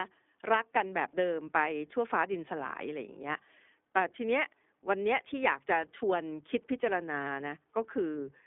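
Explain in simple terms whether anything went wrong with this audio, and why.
From start to finish, the speech went through the iLBC codec, which keeps only 250 Hz to 3.5 kHz and rebuilds each 20 ms chunk separately, so it sounds thin and rough.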